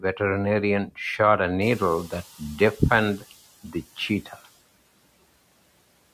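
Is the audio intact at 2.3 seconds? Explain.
No. At 2.3 s two faults overlap. The noise suppressor is catching up from 1.61 to 3.37 s, just after "shot a". The room noise jumps by about 17 dB around 1.5 s, and the suppressor's noise estimate trails it for about 1.76 s. So the noise comes through with less reduction at first, then settles as roughly 8 dB of cutting takes hold.

Within that window, from 2.08 to 2.42 s, the noise suppressor also cuts the speech. It treats some speech energy as noise and pulls it down by as much as about 17 dB, over roughly a tenth of a second in total. Soft sounds there come out swallowed and faint.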